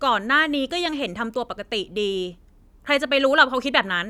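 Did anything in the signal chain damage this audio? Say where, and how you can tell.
No, nothing in the signal chain audibly damaged this speech recording; every stage appears to have passed the signal intact.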